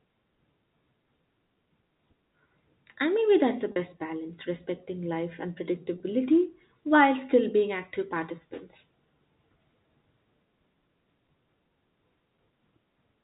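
A brief held, buzzy stretch at 3.72 to 3.76 s and a shorter one at 5.98 to 6.00 s come from packet loss with pitch repetition. The receiver filled each 40 ms and 20 ms gap in the G.711 telephone stream by repeating the last pitch period.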